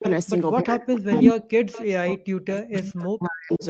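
A speech clip with two kinds of call-path fault. Echo leak shows up as a delayed second copy of the voice, trailing it by 322 ms, at 0.0 to 0.3, 0.96 to 1.34, 1.72 to 1.86, 2.81 to 3.0 and 3.52 to 3.66 s. Most of these scraps sit well below the main voice, but the one from 0.96 to 1.34 s is louder than the speech itself. The likely cause is a loudspeaker on the far side whose echo canceller let part of what its microphone picked up return. Because the fault adds a copy at a fixed lag, it is not reverberation, which smears sound continuously rather than repeating it at one set delay.

Speech suppressed in double talk works the other way, by taking sound away. From 0.62 to 1.3 s and from 1.87 to 3.63 s the voice dips sharply, losing its top end or dropping out in pieces, and at its deepest it falls almost to silence. This is likely an echo canceller that could not separate the near talker from loudspeaker echo while both sides were active, and so turned both down. 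Unlike a packet dropout, these dips follow the overlap with the other side. Throughout, the audio band stops at about 8 kHz, as expected for this call path.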